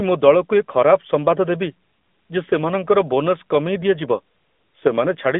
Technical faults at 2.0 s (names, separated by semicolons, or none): AMR narrowband mobile codec; lost AMR speech frames